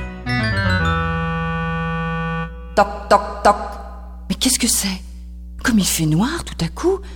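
A steady low tone sits under the sound for the whole clip, pitched at 60 Hz with a few low harmonics above it, running about 15 dB below the main signal. This is mains hum, where the power line leaks into the audio through a ground loop or a nearby transformer.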